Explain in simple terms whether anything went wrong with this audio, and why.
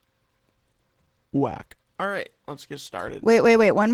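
Yes, something went wrong, and it lasts the whole clip, start to finish, about 4 seconds. The speech went through Opus voice compression squeezed to a small data budget, and the damage is plainly audible. Opus handled it in hybrid mode: the lower part of the sound was rebuilt from a compact speech model, and a separate layer roughly sketched in the high end. Working in 20 ms chunks with so little data, it can't carry all the detail, so it fills in approximations.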